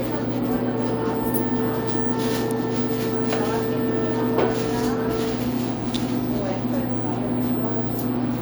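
A sharp snap cuts across the sound at 2.51 s, and a second crack follows at 5.94 s, the first lasting about a millisecond and the second about 17 ms, each sitting on top of the audio. Both are an electrical switching spike: a nearby switch, motor or static discharge likely threw a brief arc that the audio line picked up as interference, adding a click that bears no relation to the sounds being recorded.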